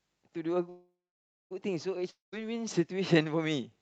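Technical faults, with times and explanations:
0.69–1.53 s, call audio freeze: the last sound is drawn out as a fading buzz, then about 0.56 s of silence, before the audio resumes exactly where it stopped. Packets were likely held up until the jitter buffer ran dry, leaving an 0.81 s gap.
2.11–2.34 s, long network dropout: the sound trails into a decaying buzz and about 0.15 s of silence, then returns further on, with roughly 0.22 s of audio skipped. Packets likely never arrived, so the receiver concealed the hole and moved on without them.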